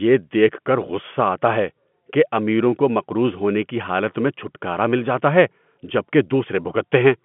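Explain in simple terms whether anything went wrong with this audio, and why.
Nothing went wrong: the speech has the narrow sound of an ordinary telephone line, with only the range from about 150 Hz to 3.4 kHz kept, which is exactly how standard G.711 phone coding is meant to sound.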